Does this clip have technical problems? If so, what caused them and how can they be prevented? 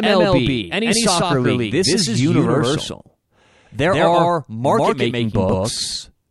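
Yes. Throughout the speech, every syllable is heard twice: a second, equally loud copy trails the first by roughly 150 ms, giving a dry, flat slapback with no reverberant tail or room colour. This is a doubled audio track, where the same signal reaches the mix by two routes. The likely cause is a second capture through a slower path, such as a monitoring return, being recorded alongside the direct feed. Preventing it means routing each source into the mix only once and muting any delayed return or duplicate input.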